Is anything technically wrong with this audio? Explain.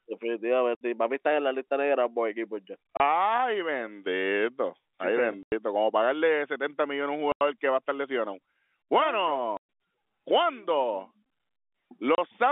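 Yes. The speech has packet loss filled with silence at six points: 0.75 s (60 ms), 2.97 s just after "negra por equipos ya" (30 ms), 5.43 s (90 ms), 7.32 s between "a un" and "que va a estar" (90 ms), 9.57 s (120 ms) and 12.15 s (30 ms). Every gap is a multiple of 30 ms, which points to 30 ms packets. The receiver played silence in place of each missing packet, so the narrowband telephone-coded speech drops out abruptly, with hard edges.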